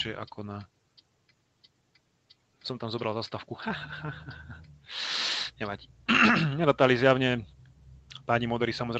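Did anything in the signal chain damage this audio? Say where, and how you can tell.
Yes. A noise suppressor applied to music or sounds acts throughout, in call processing. It mistakes sustained material and tails for noise, so levels pump by about 5 dB.

Sound cut by the noise suppressor occurs at 0.67 to 2.64 s and 7.57 to 8.28 s. Sustained parts sink by about 12 dB and 10 dB respectively, with decays cut short.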